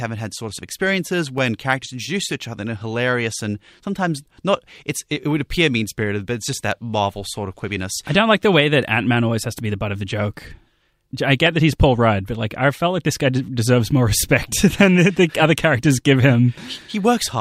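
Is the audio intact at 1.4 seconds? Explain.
No: dropped samples at 1.38 s, between "had sorts of experiences" and "characters introduce each other". The waveform jumps abruptly, likely from a fraction of a millisecond of missing audio, heard as one sharp click.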